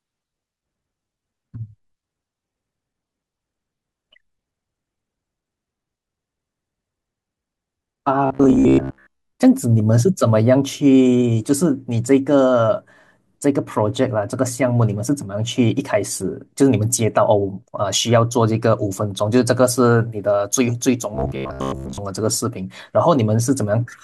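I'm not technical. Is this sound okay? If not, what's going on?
No. Robotic sound from repeated short buffers appears from 8.26 to 9.32 s and from 21.15 to 21.98 s. The speech becomes a stiff, metallic buzz near 67 Hz. New audio likely arrived too slowly, so tiny pieces were replayed in place of most real sound.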